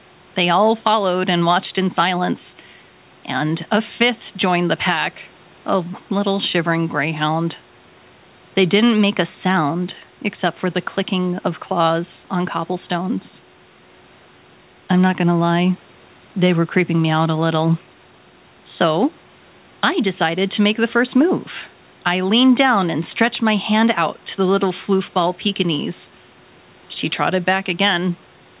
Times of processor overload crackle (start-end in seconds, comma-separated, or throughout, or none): none